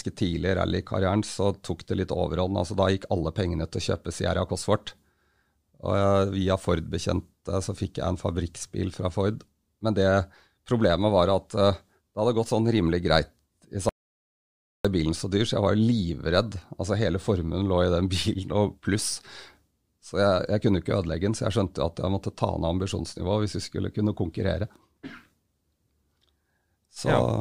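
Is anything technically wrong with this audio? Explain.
Yes. From 13.89 s to 14.85 s the speech is interrupted by an audio dropout to silence lasting about 0.96 s, ending just before "bilen så dyr så". The input signal was likely lost while recording continued, so silence was written in place of sound. The speech cuts off abruptly into total silence with no room tone, then resumes mid-flow. On a waveform this shows as a flat line, and on a spectrogram as a dark vertical band.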